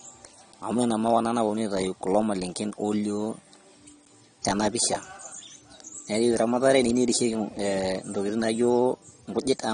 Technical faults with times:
0.00-9.74 AAC compression

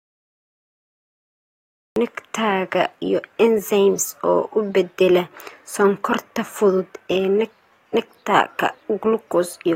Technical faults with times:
0.00-1.96 cut-off start

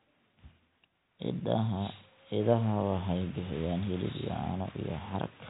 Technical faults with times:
none

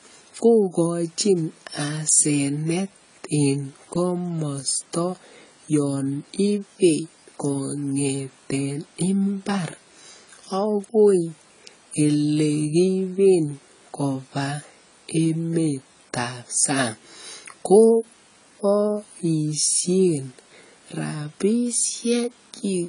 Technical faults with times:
0.00-22.88 AAC compression

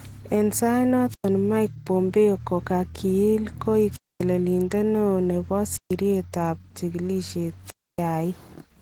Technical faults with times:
0.00-8.81 Opus voice compression
1.09-1.28 wireless microphone squelch dropout
3.91-4.24 wireless microphone squelch dropout
5.72-5.94 wireless microphone squelch dropout
7.65-8.01 wireless microphone squelch dropout

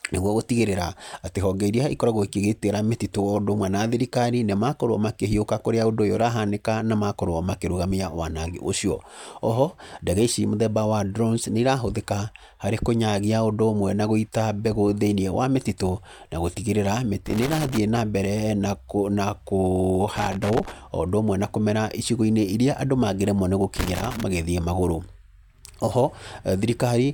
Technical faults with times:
17.26-17.78 loose connector crackle
20.16-20.72 loose connector crackle
23.76-24.23 loose connector crackle

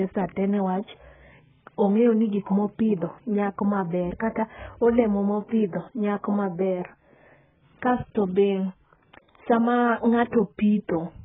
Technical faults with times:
0.00-11.24 AAC compression

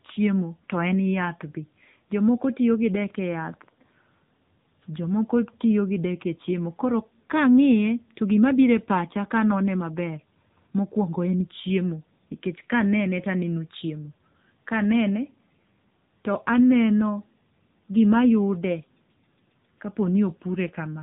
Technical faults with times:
0.00-21.02 AMR narrowband mobile codec

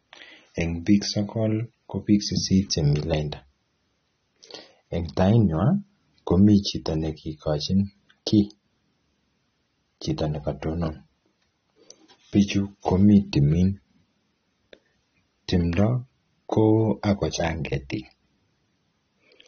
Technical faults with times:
0.00-19.48 AAC compression

